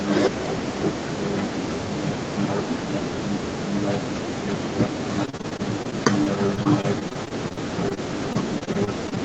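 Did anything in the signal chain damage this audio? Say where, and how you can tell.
Yes, the network stage did, through repeated packet loss (robotic sound) from 5.25 s to 9.18 s. Roughly thirty short holes appear across that stretch, none longer than 43 ms. The receiver patched each one by stretching the last decoded sound forward, so about 16% of the span is concealment rather than real signal. The result is choppy speech with fragments missing. Outside those holes the speech carries the Opus call path's 8 kHz band limit.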